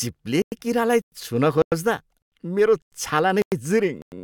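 A gap between chunks interrupts the speech seven times, at 0.42, 1.02, 1.62, 2.22, 2.82, 3.42 and 4.02 s, each a 100 ms hole. The audio arrived in 0.5 s chunks, and silence was inserted at every join, so nothing is lost but the speech stops and restarts on a rigid 0.6 s rhythm. On a waveform these appear as flat, near-silent stretches, and on a spectrogram as evenly spaced blank vertical bands.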